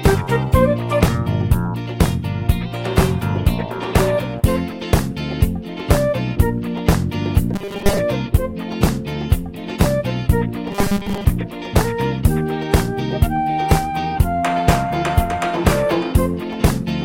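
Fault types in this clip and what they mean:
Robotic sound from repeated short buffers: twice, from 7.54 to 7.98 s and again from 10.71 to 11.25 s, the sound collapses into a stiff metallic buzz pitched at 200 Hz, which points to a 5 ms chunk being looped. The likely cause is new audio arriving too seldom, so the last small buffer gets replayed to fill the gap. By ear, most of each stretch is that repeat rather than fresh material, so the sound only loosely keeps its shape.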